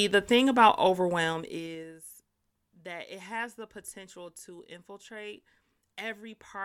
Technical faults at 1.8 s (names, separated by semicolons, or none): zipper noise